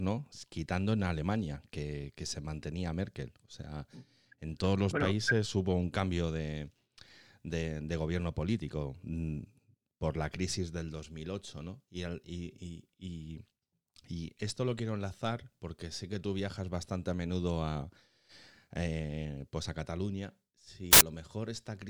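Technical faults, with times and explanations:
20.93 to 21.01 s, samples built from the wrong bytes: for about 80 ms the speech turns into a loud burst of harsh broadband noise. The reader assembled each sample's bytes in the wrong order or alignment, so the jittery low bits landed on top and swamped the real waveform.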